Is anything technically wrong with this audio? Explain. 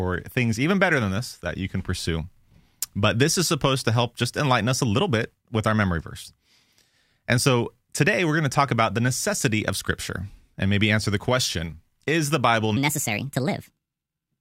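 Yes. From 12.77 s to the end at 14.41 s, there is a section at the wrong speed. The speech suddenly runs at 1.37 times its proper rate. Speed and pitch rise together, so the voice jumps up by about five semitones. It sounds hurried and thin, almost chipmunk-like, in that closing stretch. The likely cause is that this portion was played back or edited against the wrong clock. The timing of that stretch gets squeezed.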